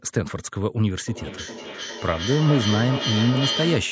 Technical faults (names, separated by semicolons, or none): feedback echo between two devices